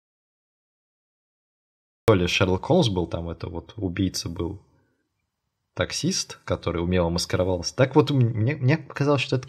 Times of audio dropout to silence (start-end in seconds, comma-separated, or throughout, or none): 0.00-2.08